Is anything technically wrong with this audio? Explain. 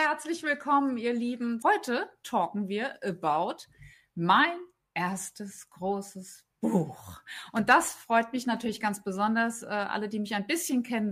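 No, there are no technical faults in this audio.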